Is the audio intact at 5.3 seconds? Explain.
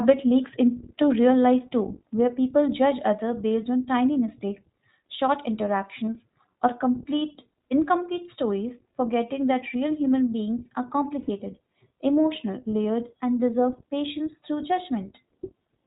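No, iLBC codec damage runs through the whole clip, including 5.3 s: band-limited below 4 kHz, each 20 ms-style frame coded independently, giving rough, synthetic speech, unlike plain filtering.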